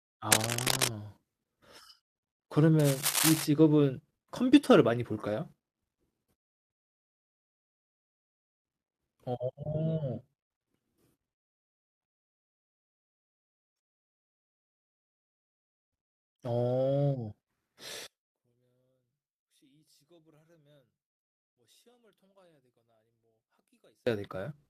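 Between 0.32 and 0.90 s, and again from 2.79 to 3.45 s, dense, uneven rustling sits over the speech. This is cable scratch noise, likely from a worn cable, connector or control being moved so its contact resistance jumps about rapidly. The first burst is roughly as loud as the speech and the second a little quieter. Unlike steady hiss or a single click, it is ragged and bursty, and it stops once the handling stops.

At 9.35 s a brief patch of speech turns rougher and noisier for a moment, with no silence or dropout. This is a lost packet rebuilt from error correction. One packet went missing, and the decoder played the low-bitrate copy carried in the next one. The roughness lasts about 20 ms, which fits a single Opus frame. Plain packet loss would leave a gap or a smeared concealment, but here the sound simply continues at lower quality.

From 18.07 to 24.07 s the speech nearly disappears, dropping by about 39 dB, and leaves only a faint residue. 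The likely cause is one channel inverted: one stereo channel has reversed polarity, so the centred speech cancels when the channels are summed to mono, and only their small difference survives. A fade or gain error would keep the tone and just lower the level, whereas this cancellation removes the shared sound itself.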